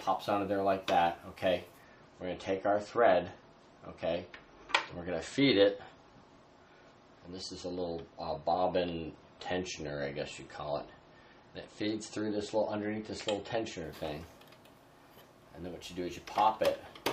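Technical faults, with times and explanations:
1.84–13.84 s: adaptive stream at a lower bitrate. The treble suddenly vanishes above 8.4 kHz and swirly codec artefacts appear, which fits a switch from 128 to 32 kbit/s MP3. On a spectrogram the top is cut off flat at 8.4 kHz, and the waveform shows no gap.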